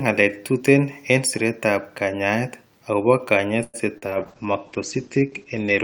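A call audio freeze begins at 3.63 s, right after "en siretab kanyaayet agobo", and lasts until 3.76 s. The last sound is stretched into a fading buzz for about 103 ms, with only about 10 ms of near-silence, before the speech resumes exactly where it left off. Nothing is lost, but everything after this point now arrives about 103 ms later. The likely cause is packets held up in transit that left the jitter buffer empty.

Short concealed packet loss follows from 3.98 to 4.04 s. About 40 ms of speech never reached the decoder in time, and the receiver papered over the hole with roughly 42 ms of synthesized continuation, extending the preceding sound before cross-fading back into real audio. The result is a brief smear or wobble, and whatever fell inside that window is simply gone.

A call bitrate drop starts at 4.07 s and continues to the end of the clip. The encoder falls from 64 kbps to 11 kbps, and the audio bandwidth narrows from 20 kHz to 8 kHz. 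The sound turns muffled, losing its upper sibilance and air, and takes on a coarse, watery texture for the remaining 1.8 seconds. This fits a sharp fall in the call's bandwidth estimate that forced far sparser coding.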